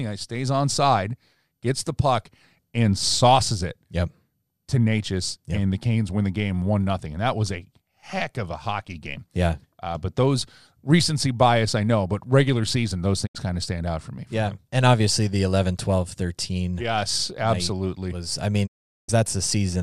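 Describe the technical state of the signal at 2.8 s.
At 2.8 s the speech signal is intact, with no audible technical fault at that moment.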